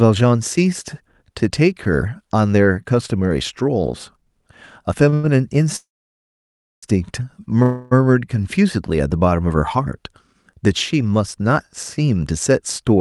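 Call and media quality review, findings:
Short stall from a late packet, 5.09–5.14 s and 5.14–5.25 s: sound held about 27 ms then 94 ms with a faint buzz or dip. The jitter buffer ran dry and nothing was lost, unlike a dropout.

Call audio freeze, 5.76–6.84 s: a held buzz or hiss fades into roughly 1 s of silence. Likely packets delayed in transit emptied the jitter buffer. Playback resumes where it stopped; it is far longer than a stall.

Call audio freeze, 7.62–7.93 s: a 0.29 s held buzz or hiss with no silence, then playback resumes. Likely the same delayed-packet buffer underrun, still longer than a single late-packet stretch.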